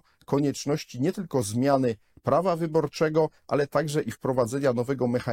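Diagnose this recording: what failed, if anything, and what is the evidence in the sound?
The failure sits in the codec stage: damaged data in a compressed stream. Early in the speech, from 0.35 to 0.38 s, a brief glitch occurs, lasting only about 26 ms. The corrupted bytes at that point no longer form valid frames, so the decoder misreads or discards them, loses frame sync, and hunts for the next intact header. The disruption while it resynchronises is what comes through as that short glitch.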